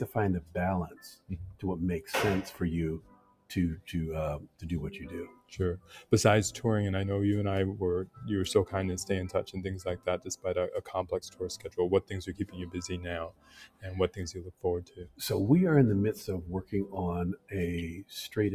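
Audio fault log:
Throughout: noise suppressor applied to music or sounds. A speech-oriented suppressor stays active across the whole clip and treats sustained, steady material as background noise. Its gain reduction rises and falls over a range of roughly 15 dB. Onsets pass largely intact, while held portions and decaying tails are pulled down. The level therefore pumps and flutters instead of following the source, and the sound loses body between attacks.
0.41–1.64 s, 2.53–4.63 s, 5.27–6.12 s, 8.06–8.23 s, 9.47–15.21 s, 17.36–18.11 s: sound cut by the noise suppressor. In each span the suppressor classifies part of the sound as noise and attenuates it harder than elsewhere, with the deepest dips about 17–18 dB. Sustained and fading content sinks or has its decay truncated, and transients survive. The longest stretch, 9.47–15.21 s, is audibly thinned for around three seconds in total. The 8.06–8.23 s event is a brief dip.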